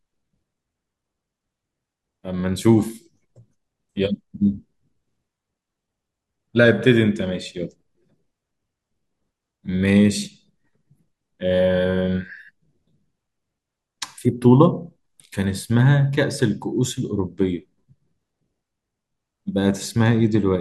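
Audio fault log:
No faults detected.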